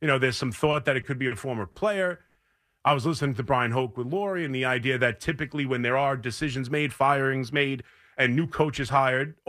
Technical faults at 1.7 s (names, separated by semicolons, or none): short stall from a late packet